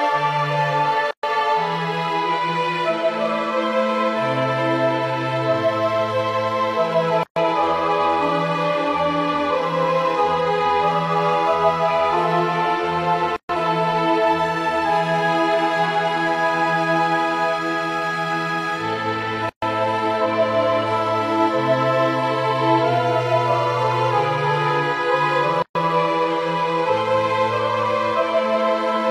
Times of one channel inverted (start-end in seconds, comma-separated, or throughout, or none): none